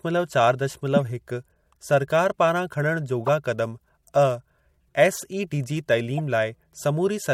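A short chirp-like burst cuts into the speech at 3.26 to 3.29 s, peaking around -15 dBFS, and a quieter one at 6.18 to 6.20 s, near -20 dBFS. Each is a corrupt frame decoded: flipped bits across a couple of compressed frames misplaced energy in frequency.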